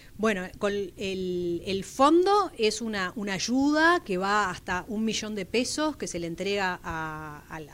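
At 4.02 to 4.06 s there is a brief case of chunks out of order: one 20 ms chunk was delivered a single chunk late, so it plays after the block that should follow it. No audio is missing, but the swapped pair creates three hard joins, heard as a tiny jumbled stutter. On a waveform the joins show as abrupt discontinuities; a spectrogram shows thin vertical broadband lines at each join.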